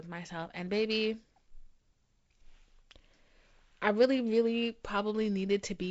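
This is speech carried over G.722 wideband telephone coding at 48 kbit/s, with nothing above about 7.7 kHz, and there's nothing technically wrong to point to here.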